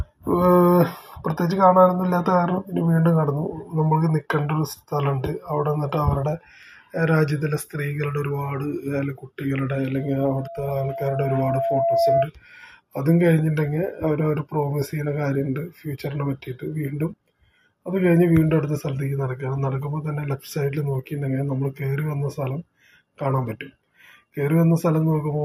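From 9.95 to 12.29 s, a loudspeaker feedback squeal appears. A single 676 Hz tone swells over about two seconds. It rises to roughly 5 dB above the sound. The microphone caught its own loudspeaker, and the loop gain passed one there.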